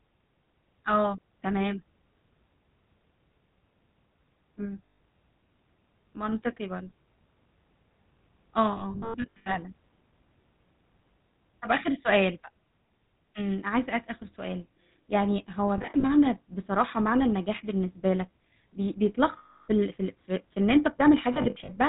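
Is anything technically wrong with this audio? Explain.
Yes. The speech has a steady buzzy, gravelly roughness with nothing above 4 kHz, the plainly audible signature of the GSM full-rate codec, consistent with a 13 kbps stream. It models the vocal tract and drives it with sparse, regular pulses, discarding most of the excitation detail.

There are also lost GSM frames at 4.86–5.0 s, 8.72–9.72 s, 15.78–16.05 s, 19.38–19.68 s and 21.34–21.7 s. Each one produces a rough, metallic ring as the decoder repeats the last good frame. At 8.72 s the losses are scattered across about 0.8 s, and the longest gap is around a tenth of a second.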